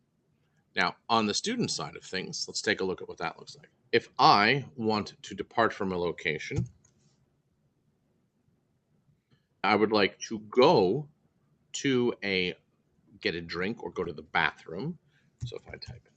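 Pre-emphasis left on, from 0.87 to 2.87 s: the treble boost of a 50-microsecond FM-style curve was applied without the matching de-emphasis, so the curve lifts 10 kHz about 11 dB above the 1 kHz level. The passage sounds thin, bright and hissy, even though the call path caps the band near 8 kHz.

Short concealed packet loss, from 14.04 to 14.06 s: a brief slice of audio never arrived, and the receiver bridged about 10 ms by extending the preceding sound before blending back. It comes through as a momentary smear or wobble in the sound.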